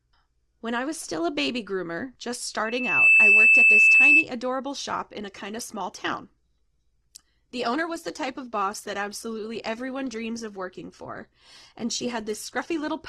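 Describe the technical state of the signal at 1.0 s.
At 1.0 s the speech signal is intact, with no audible fault at that moment.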